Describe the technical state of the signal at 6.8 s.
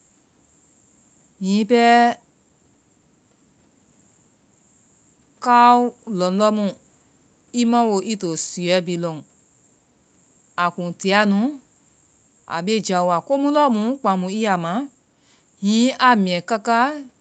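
At 6.8 s the speech is intact, with no fault present, only the steady call-path band limit that leaves nothing above about 8 kHz.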